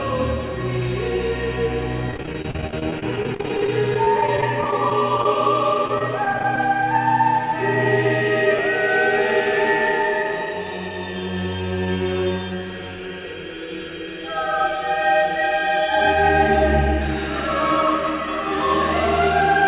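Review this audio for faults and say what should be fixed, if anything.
Repeated packet loss (robotic sound), 2.11–5.26 s and 5.88–6.58 s: dropped packets left gaps up to 32 ms, each patched with prior audio, sounding choppy. A larger jitter buffer and forward error correction would prevent this.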